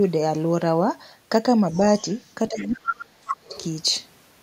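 At 1.71 to 1.79 s and again at 1.98 to 2.16 s, faint fragments of a second voice sit under the speech, about 30 dB below it. This is the other side's voice leaking through, most likely because the far end's loudspeaker output reached the microphone and the echo canceller left a residue behind.

From 2.5 to 3.56 s, roughly a full second, the talker's own speech is pulled down in pieces, by as much as about 35 dB at its deepest. This is speech suppressed in double talk. Both ends were active at once, and the canceller, likely unable to tell its near-end talker from the loudspeaker echo, attenuated everything. The result is a voice that dips and drops out in chunks while the other side is present.

Inside that same window the leak becomes much stronger. From 2.6 to 3.04 s and from 3.28 to 3.35 s the other side's voice comes through only about 5 dB under the speech, nearly level with it. A last fragment at 3.51 to 3.64 s falls back to about 25 dB down.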